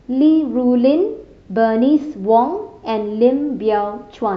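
A short speech recording with no audible technical fault anywhere in the signal.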